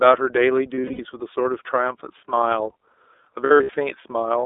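Throughout, the speech carries the iLBC codec: band-limited to roughly 300 Hz to 3.6 kHz, with a plainly audible rough, synthetic edge that fits the 30 ms, 13.33 kbps mode. Unlike a plain telephone bandpass, the roughness comes from coarse excitation coding, not just filtering.

From 0.76 to 1.00 s, and again from 3.44 to 3.75 s, lost iLBC frames cause brief buzzy, held-vowel smears. About 150 ms and then 180 ms go missing, scattered across each stretch in runs no longer than about a tenth of a second. The decoder repeats the last pitch cycle with added noise, and the voice snaps back cleanly at once, with no lingering warble as in codecs that depend on earlier frames.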